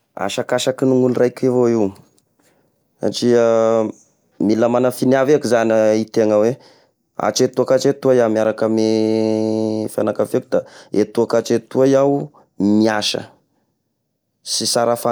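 No technical faults are audible anywhere in the speech recording.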